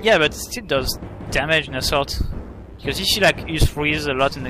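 No technical faults can be heard anywhere in the audio, and the signal stays continuous and stable throughout.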